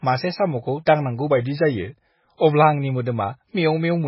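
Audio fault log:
Throughout: MP3 compression, likely at a very low bitrate around 16 kbps; nothing above 5.6 kHz, sibilants watery, spectrogram shows flat ceiling and flickering holes.
1.30–2.62 s: drift correction step, likely clock matching; speech slows 5.7% and drops about a semitone, then snaps back; spectrogram harmonics step down then up.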